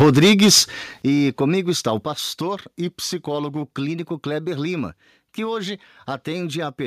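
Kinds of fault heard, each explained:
Microphone overload: From 0.0 to 0.6 s, before "e comigo está o", the loudest speech peaks are flattened, roughly a tenth of samples, with about 9 dB of overshoot. This gives a harsh crackle, likely because the microphone input gain was set too high for the converter.
Microphone volume stepped down: The level of speech and background drops abruptly at 0.02 s (about 3 dB), 1.02 s (about 9 dB) and 2.04 s (about 5 dB, just after "e comigo está o"). This is likely call software cutting the device's input gain in steps in response to the clipping.
Drift correction step: From 2.40 to 3.62 s, just after "e comigo está o", playback slows by 6.3% and pitch falls 113 cents, a bit over a semitone. This is likely clock-matching software shifting the rate to rebalance its buffer.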